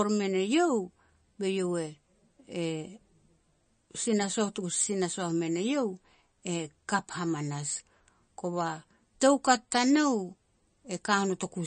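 From start to finish the speech sounds watery and swirly, with a metallic chirping around the s sounds and consonant attacks that smear rather than land cleanly, and nothing reaches above 9 kHz. This is likely MP3 compression at a low bitrate, one that points to around 32 kbps. Short of bits, the encoder chops off the treble at a fixed point and drops weaker frequency lines, which flicker in and out from frame to frame.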